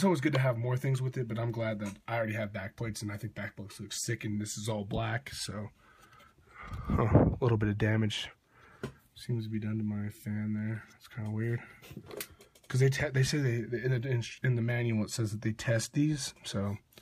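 Nothing stood out on listening; no technical fault could be heard anywhere in the audio.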